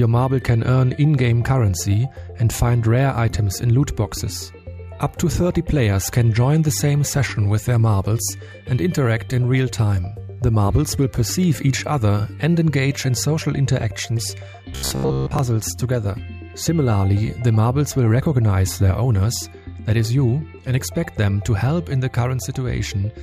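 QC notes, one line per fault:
14.73–15.39 s, robotic sound from repeated short buffers: the sound collapses into a stiff, metallic buzz fixed at 66.7 Hz that only loosely follows the underlying audio. The likely cause is new audio arriving too seldom, so playback keeps reusing its most recent buffer while real material is skipped. A 66.7 Hz buzz fits a repeated chunk of about 15 ms, and most of this stretch is made of those repeats.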